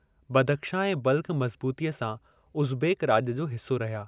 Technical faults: none

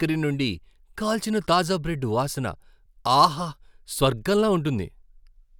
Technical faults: none

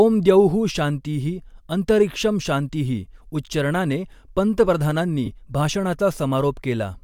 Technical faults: lost LE Audio frames

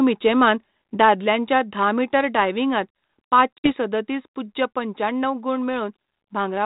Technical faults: packet loss on an ADPCM call

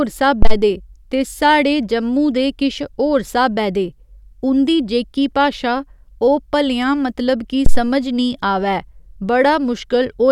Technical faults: phantom power thump

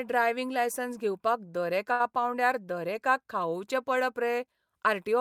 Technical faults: short stall from a late packet

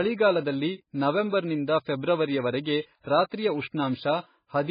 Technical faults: MP3 compression

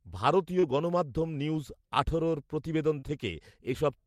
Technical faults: short concealed packet loss

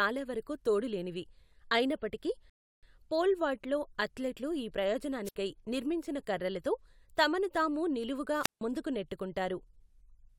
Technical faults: rebuffering stall; wireless microphone squelch dropout

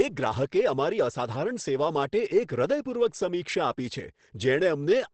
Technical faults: Opus compression

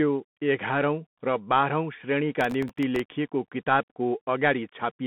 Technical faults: Bluetooth CVSD headset codec; processor overload crackle

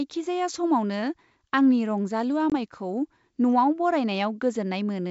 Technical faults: packet loss on an ADPCM call; audio missing between chunks

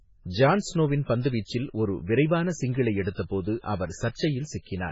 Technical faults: MP3 compression

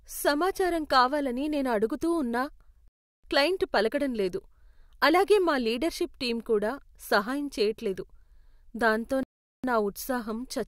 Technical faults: rebuffering stall

